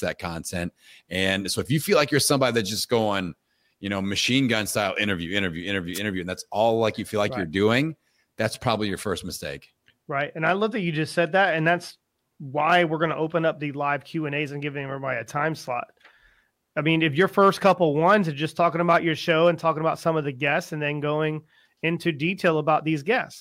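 A speech recording with a brief swish of static from 5.94 to 5.99 s, a wireless microphone noise hit where the FM radio link faded and receiver noise broke through.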